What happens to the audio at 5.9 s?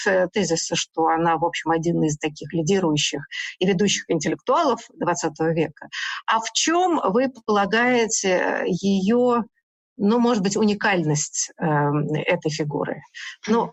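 At 5.9 s the audio is near the end of a stretch of sound cut by the noise suppressor, running from 5.70 to 5.93 s. The suppressor mistook this material for noise and pulled it down harder than its surroundings, by about 11 dB at the deepest point, over roughly 150 ms in total. It sounds like a brief sag or a clipped-off tail. On a waveform the envelope visibly shrinks there; a spectrogram shows a faded, thinned patch.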